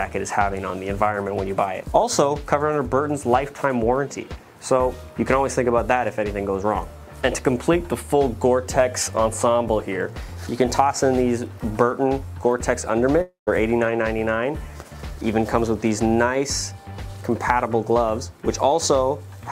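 At 13.21 s the sound suddenly smears into a buzzy, hissing continuation of itself that fades away, then a brief near-silence follows before the audio resumes at 13.49 s, jumping forward with roughly a quarter of a second of material gone. This is a long network dropout, likely caused by a run of lost packets: the receiver held and faded the last sound it had to cover the gap, then went quiet until fresh audio arrived.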